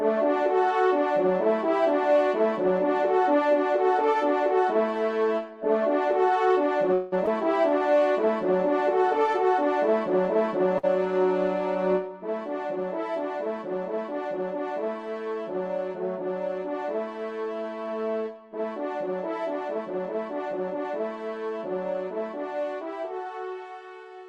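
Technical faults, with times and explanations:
6.93 to 7.14 s, call audio freeze: the last sound is carried on as a fading buzz or hiss for about 185 ms. The likely cause is packets held up in transit, so the jitter buffer runs dry and the receiver fills the wait by extending what it last had. When the packets finally arrive, playback picks up exactly where it stopped. Nothing is lost, but a gap of roughly a fifth of a second is inserted and the overall delay grows by that amount.
7.26 to 7.29 s, skip ahead: playback jumps forward almost seamlessly, with only a 9 ms join. About 70 ms of audio is simply gone, so the material on either side of the cut is spliced nearly directly. This happens when a stretch is discarded while later audio is already queued, in transit or when the buffer overflows. Dropping it pulls the delay back down by around 50 ms.
7.69 to 8.01 s, jitter buffer slow-down: the sound drags at 86% of normal speed while keeping its pitch, and sustained parts stretch out. 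With its reserve low, the jitter buffer builds it back up by repeating individual pitch periods and small slices of pauses many times over. Across this third of a second those repeats add 54 ms, and that added time is exactly what makes the passage sound slowed.
10.78 to 10.85 s, short stall from a late packet: one sound is held too long for about 50 ms, with a slight buzz or dip, and then carries on from the same point. A packet missed its playout deadline, the jitter buffer ran empty for that moment, and the receiver stretched the last sound until the packet arrived. Nothing is missing, but the delay increases by those 50 ms and the hold is audible as a brief hitch.
19.68 to 21.01 s, jitter buffer speed-up: over these 1.3 s the sound runs at about 114% speed with unchanged pitch, giving a hurried feel. The buffer is holding more audio than its target, as happens after delayed packets arrive in a bunch. 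To work off the excess, the receiver repeatedly trims out short chunks of one or a few pitch periods, removing about a fifth of a second in total across the stretch.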